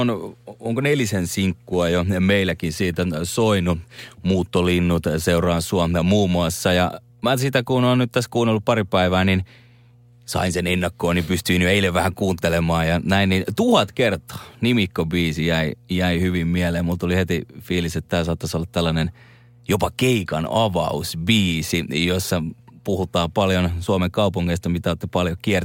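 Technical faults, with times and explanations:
Throughout, mains hum: a steady low tone at 60 Hz sits under the speech, roughly 30 dB below it, with some low harmonics above. Power-line current is leaking into the signal path, most plausibly through a ground loop or a transformer near the cabling.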